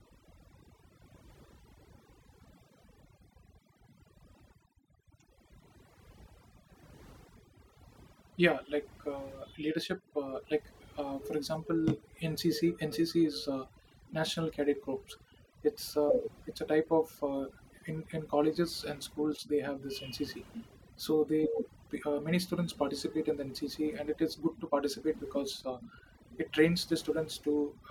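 A speech recording marred throughout by overdone noise removal: the reducer was set so aggressively that any frequency band hovering near its noise estimate gets pulled down hard or shut off, taking the softer parts of the voice with it. Between phrases the background sinks to near silence dotted with twinkling, chirpy specks. A spectrogram shows isolated, flickering time-frequency blobs in the gaps and ragged, hollowed-out harmonics during speech.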